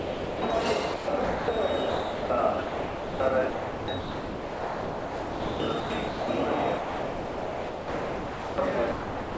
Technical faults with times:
0.00-0.42 sound dropped by the voice detector
0.94-1.48 sound chopped by the voice detector
1.90-2.30 sound dropped by the voice detector
2.64-3.20 sound dropped by the voice detector
3.50-6.28 sound chopped by the voice detector
6.78-8.58 sound dropped by the voice detector
8.92-9.37 sound dropped by the voice detector

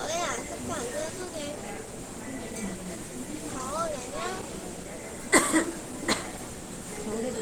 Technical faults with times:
0.00-7.41 Opus compression

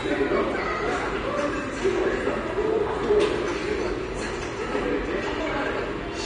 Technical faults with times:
0.00-6.26 AAC compression

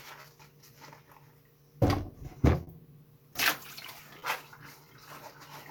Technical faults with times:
0.00-5.71 clock drift between sender and receiver
0.21-0.26 short stall from a late packet
2.63-2.69 short stall from a late packet
4.19-4.24 short stall from a late packet

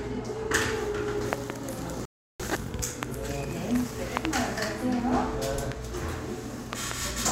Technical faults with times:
1.33-1.52 loud pop
2.05-2.40 playback stall
3.03-3.05 loud pop
4.17-4.27 loud pop
5.72-5.74 loud pop
6.73-6.93 loud pop

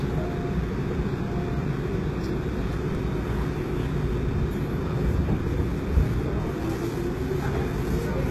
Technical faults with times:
0.00-8.30 HE-AAC compression
2.93-2.97 chunks out of order
6.41-6.48 chunks out of order

